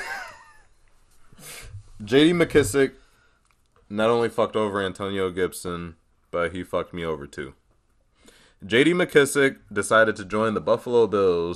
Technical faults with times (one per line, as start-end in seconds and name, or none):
0.00-11.55 MP2 compression